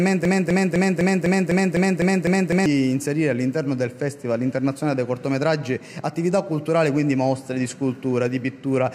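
From the start to 2.66 s, a broken-record loop is already under way: one 0.25 s fragment repeats exactly ten times, likely from a stalled stream resending its last piece. A spectrogram shows identical blocks tiled every 0.25 s, and the audio meant for that span is lost.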